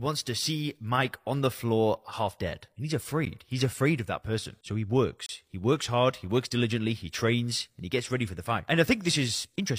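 Speech clip with two gaps between stream segments. Hard-edged silences of about 11 ms at 3.25 s and 30 ms from 5.26 to 5.29 s appear where segment timestamps fail to meet. This fits 2-second segments. No audio is lost.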